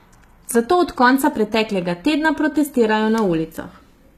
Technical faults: HE-AAC compression

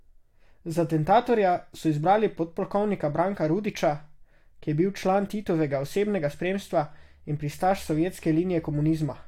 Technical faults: none

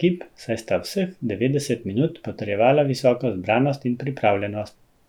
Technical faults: none

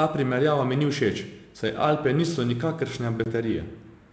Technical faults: packet loss on an ADPCM call

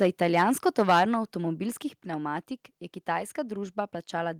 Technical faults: microphone overload; microphone volume stepped down

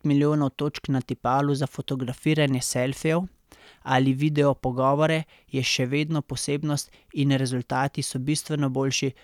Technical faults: none

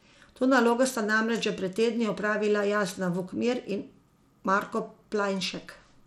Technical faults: Bluetooth SBC compression

